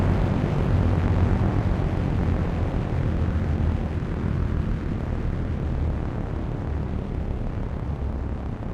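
Sample clock jitter runs throughout the clip. The converter's clock wanders by around a microsecond, so timing errors grow with waveform slope, adding hiss roughly 55 dB below the signal that follows loud, bright sounds. A spectrogram shows broadband noise tracking those moments, absent in silences.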